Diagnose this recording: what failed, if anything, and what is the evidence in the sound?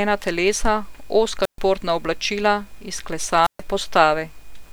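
A wireless microphone squelch dropout occurs twice, at 1.42 to 1.59 s and at 3.41 to 3.62 s. Each time, hiss swells briefly, then the speech mutes for about 130 ms. The radio link faded. The receiver's squelch muted the output until the signal recovered.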